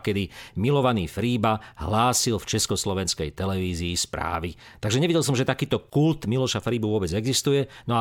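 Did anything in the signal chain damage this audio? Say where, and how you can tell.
Yes. There is a gap at a join of encoded pieces, from the codec stage. At 5.90 to 5.92 s the speech drops out for about 24 ms, then resumes where it stopped. The edges are smeared by the codec. Separately encoded pieces, apparently 6 s long, were joined untrimmed, leaving encoder delay and end padding in.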